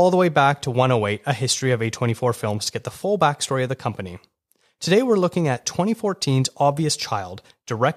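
From 0.19 s to 7.85 s, faint clock slip clicks tick through the speech roughly every fifth of a second, about forty in all. A clock mismatch of around 100 ppm is the likely cause, forcing a single-sample drop or repeat each time. On a spectrogram they show as evenly spaced thin vertical lines; on the waveform, tiny one-sample steps.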